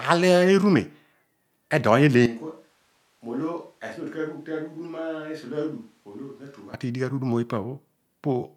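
At 2.26 s the speech suddenly goes roomy and hollow, thinner in the bass and about 10 dB quieter, with room noise coming up to around 35 dB below the speech. That's likely a switch to a distant microphone, and it snaps back at 6.74 s.

Inside that stretch, at 4.86 s, there's a tiny blip: a corrupt frame decoded. Damaged bits in a couple of compressed frames got played anyway, putting energy at the wrong frequencies, and it comes out as a faint chirp peaking around -40 dBFS.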